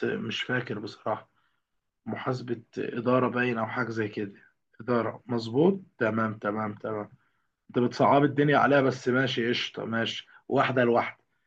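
No technical faults can be heard anywhere in this speech recording. There is nothing in it that calls for a time or a value to be pointed out.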